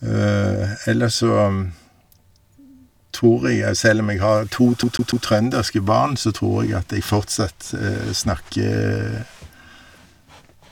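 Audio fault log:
4.83–5.26 s, CD stuck on one turn: after "om jeg har to", a 145 ms slice of speech repeats three times with brief mutes, then resumes at "barn så tror".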